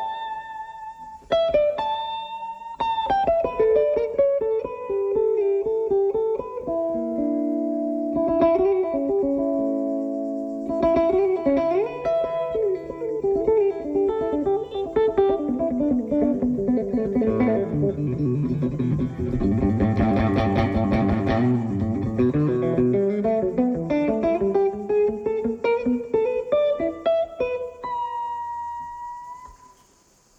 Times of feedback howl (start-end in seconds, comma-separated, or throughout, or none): none